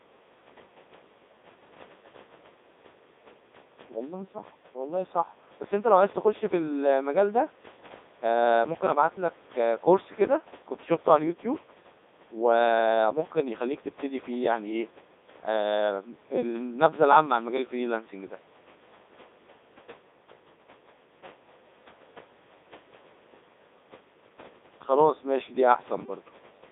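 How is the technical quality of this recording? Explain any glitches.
Technical quality is poor. The speech has been through a Codec 2 vocoder for the whole clip, heavily. The sound points to its 3.2 kbit/s mode. Only pitch, voicing, energy and spectral shape survive, rebuilt from sine waves. The voice sounds robotic and buzzy, confined to about 250 Hz to 3.7 kHz, with nothing above 3.8 kHz. Faint room noise sits about 26 dB below the speech.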